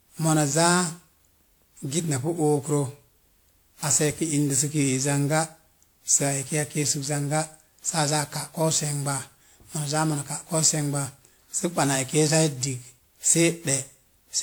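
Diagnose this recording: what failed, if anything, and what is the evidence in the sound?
The codec stage is where this went wrong, and it sounds like generation loss. The speech has a swirly, hollow quality from start to finish, consonant attacks are smeared, and the top end still reaches about 20.1 kHz. That's more damage than a single encode at that bandwidth would do, so the likely cause is repeated passes through a WMA-style codec at around 128 kbit/s, maybe ten of them. Each pass requantises on a shifted frame grid, so the noise piles up.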